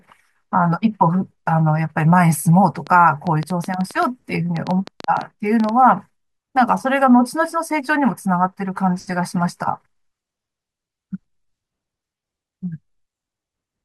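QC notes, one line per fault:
2.87–5.70 s: train of clicks, roughly twenty uneven pops at about 6.7 per second, poking a few dB above the speech, likely interference from nearby gear.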